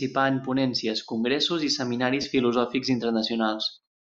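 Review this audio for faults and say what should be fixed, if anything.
Lost LE Audio frames occur from 2.22 to 2.24 s, right after "en ponències congressos i". About 20 ms of audio is missing, which fits two consecutive 10 ms LC3 frames. The decoder filled the gap by repeating the last good spectrum with randomised signs, so the speech briefly turns into a noisy, smeared texture before normal decoding resumes. To prevent it, improve the Bluetooth link margin or retransmission settings so that LE Audio frames reach the decoder without drops.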